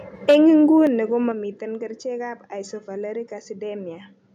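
From 0.29 to 0.49 s the input gain was likely set too high, which drove the peaks about 6 dB past the converter's limit. The flattened tops, a few percent of the samples, give the loudest speech a harsh, crackling edge. This is microphone overload.

At 0.31 s, inside that overload, the microphone volume is stepped down by about 3 dB. Call software likely reacted to the clipping input, and speech and background drop together in one sudden step.

At 0.87 s the input is switched to a poorer device, likely another microphone or a headset's call profile, with no silence at the change. The band narrows and the level falls somewhat. A faint new noise floor sits well beneath the speech, and the sound stays duller and boxier to the end.

At 1.32 s the microphone volume is stepped down again, by about 6 dB. This is likely the same automatic correction, and it lowers speech and background abruptly.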